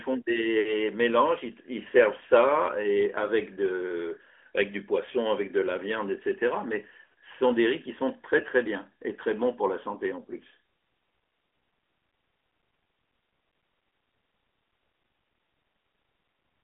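Nothing stood out on listening to this speech recording.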